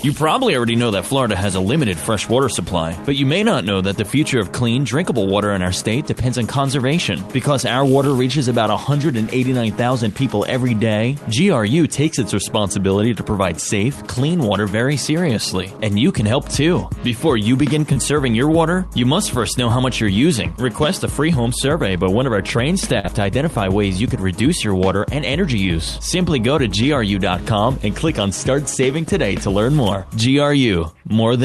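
At 17.93 to 17.98 s and again at 23.00 to 23.05 s, short concealed packet loss occurs: about 20 ms and then about 40 ms of audio failed to reach the decoder in time, and the receiver filled each gap by extending the preceding sound before crossfading back. Each shows up as a brief smear or wobble rather than silence, with the call codec's top end stopping around 12 kHz throughout.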